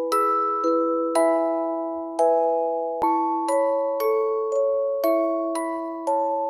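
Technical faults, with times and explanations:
3.02 s, damaged data in a compressed stream: a brief glitch cuts across the sound, lasting about 17 ms, and the audio picks up just after it. A stretch of the coded bitstream there is corrupt, so the decoder misreads the affected frame, loses its place, discards what it cannot parse and resynchronises on the next valid frame header, producing the short glitch.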